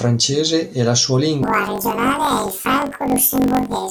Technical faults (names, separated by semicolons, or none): planar audio read as interleaved